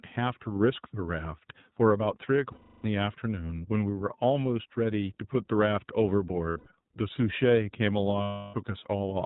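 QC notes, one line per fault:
Throughout, iLBC codec: everything above 4 kHz is gone and the voice is plainly rough and synthetic, consistent with iLBC's 15.2 kbps mode. Unlike a plain low-pass, the excitation itself sounds coarse.
2.52–2.86 s, 6.50–6.68 s and 8.22–8.55 s, lost iLBC frames: the first and last gaps are each about 320 ms of held, slightly buzzy vowel, repeated pitch cycles mixed with noise and fading. The middle one is about 140 ms of shorter dropouts scattered over 160 ms, none much longer than 70 ms. Unlike silence or clicks, each gap is filled. The voice is right again almost at once because each frame decodes alone.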